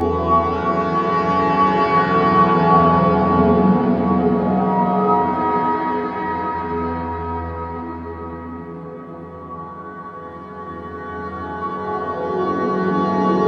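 Throughout, channel delay (comb filtering): a roughly 10 ms lag in one channel, summed to mono, notches evenly from about 40 Hz. Unlike flanging, the notches never sweep.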